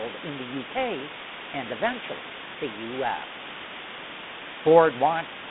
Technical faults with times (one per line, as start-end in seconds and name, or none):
0.00-5.51 low bit depth with dither
0.00-5.51 G.726 ADPCM